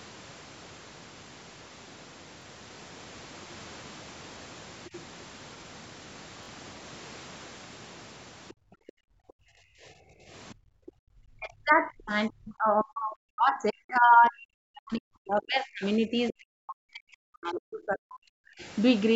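At 2.42 to 2.45 s and again at 6.43 to 6.49 s the speech catches in a brief mechanical stutter. This is Bluetooth stutter: lost packets made the receiver replay its last slice, covering about 23 ms of lost audio first and then 46 ms.

From 8.49 to 8.53 s, 8.87 to 8.92 s, 10.49 to 10.54 s, 10.87 to 10.91 s and 12.8 to 12.84 s, faint scraps of another voice sit about 30 dB below the speech, the last one louder at about 20 dB below. This is the other side's voice leaking through, likely from a loudspeaker echo the canceller missed.

Between 8.53 and 10.81 s the room background sinks by as much as about 32 dB for roughly two seconds in all. The echo canceller gated the background while the loudspeaker played.

From 11.09 to 18.64 s the talker's speech dips and breaks up, falling by up to roughly 40 dB across about seven seconds. This is speech suppressed in double talk, likely because the canceller clamped down while both sides spoke at once.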